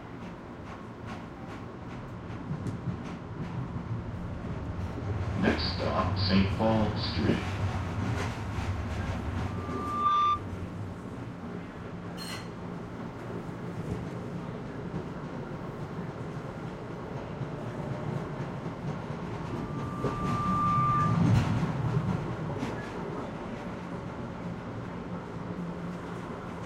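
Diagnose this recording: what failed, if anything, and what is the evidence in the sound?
A single 1.2 kHz tone swells over about a second or less into a loudspeaker feedback squeal, roughly 10 dB above the sound, from 9.46 to 10.45 s and again from 19.46 to 21.41 s. The fault lies in the acoustic path: a microphone hears its own loudspeaker, and loop gain exceeding one at 1.2 kHz lets that tone grow until the amplifier limits it or the loop is broken.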